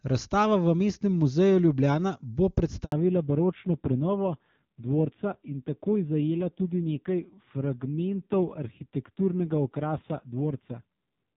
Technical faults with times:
2.84-2.92 handover gap
2.92-11.37 fallback to narrowband

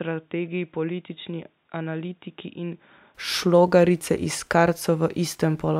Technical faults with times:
0.00-3.15 input switched to a poorer device

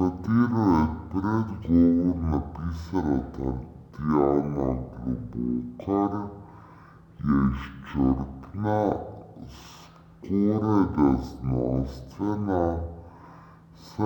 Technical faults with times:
0.00-14.05 stereo read as mono

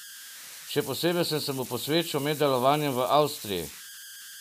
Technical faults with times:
0.00-4.40 converter idle tones

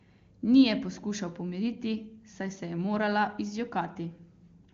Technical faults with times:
none

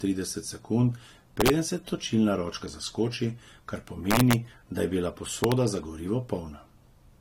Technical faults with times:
0.00-7.21 transcoding between lossy codecs
1.41-1.50 integer overflow
4.11-4.33 integer overflow
5.44-5.52 integer overflow

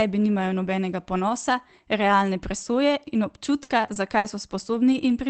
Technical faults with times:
3.63-4.26 repeated packet loss (robotic sound)
4.74-5.12 lost packet rebuilt from error correction

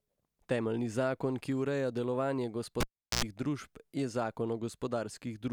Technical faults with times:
2.80-3.24 cable pulled and plugged in

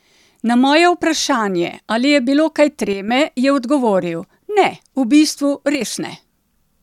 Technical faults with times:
2.93-3.08 one channel drops out
5.75-5.81 one channel drops out

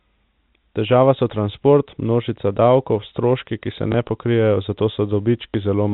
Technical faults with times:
3.92-3.94 packet loss with last packet repeated
5.50-5.54 packet loss with last packet repeated

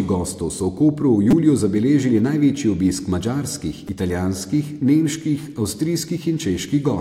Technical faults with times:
1.31-1.33 repeated buffer
3.88 repeated buffer

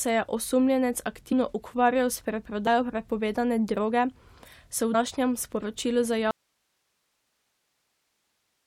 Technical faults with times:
1.31-1.33 compressed frames skipped
2.66 compressed frames skipped
4.93 compressed frames skipped
6.31-8.67 audio dropout to a faint residue

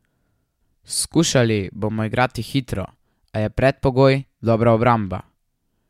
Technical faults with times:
none

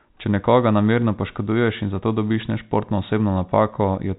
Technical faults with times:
none

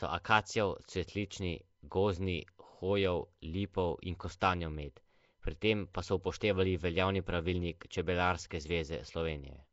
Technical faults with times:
0.00-9.72 Nellymoser compression
5.93 pre-echo

